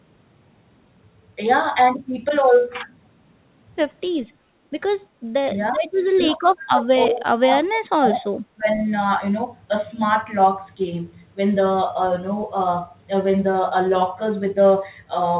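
At 4.45 to 4.54 s the room sound briefly ducks by about 10 dB, background gated by the echo canceller as it clamped the mic while the far end played. Then from 5.71 to 5.91 s, 6.14 to 8.3 s and 8.53 to 8.7 s the speech sinks by around 25 to 35 dB in chunks, the longest lasting about two seconds. That's likely speech suppressed in double talk, with the canceller turning everything down while both sides spoke. The whole thing is capped at 4 kHz through the call path, which fits narrowband G.711.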